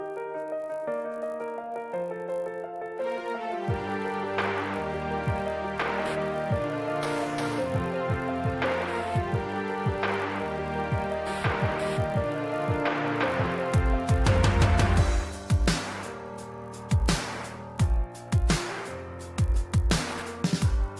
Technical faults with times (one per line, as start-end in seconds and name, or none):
0.00-21.00 resampler restarted on every block